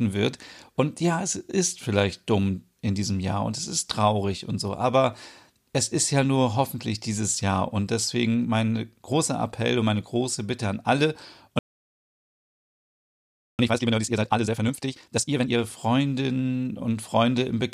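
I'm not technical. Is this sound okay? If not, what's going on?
No. Right after "an alle", at 11.59 s, the speech goes silent for 2 seconds. This is a playback stall, likely the player running short of data, and then it carries on from where it stopped instead of skipping ahead. From 13.59 to 15.59 s comes a time-compressed catch-up: the speech runs at double speed but keeps its normal pitch, unlike a sped-up tape that would sound squeaky.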